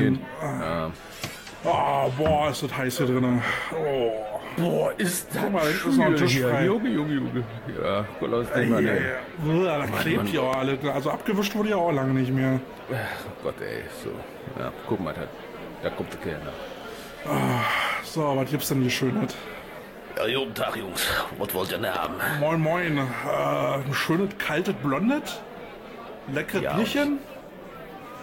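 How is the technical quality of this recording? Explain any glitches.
The recording has two loud pop faults. At 10.54 s a single sharp pop sits on top of the sound. Between 21.95 and 22.07 s two pops follow in quick succession. Each peaks roughly 15 dB above the surrounding audio. The likely cause is a sudden voltage step or pulse, as from a plug, a switch, static or a driver glitch. The circuits downstream shape that pulse into a brief thump. The sound carries on unbroken beneath it.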